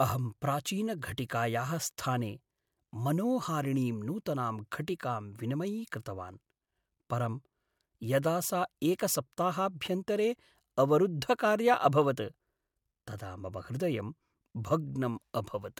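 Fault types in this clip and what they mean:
No faults are audible.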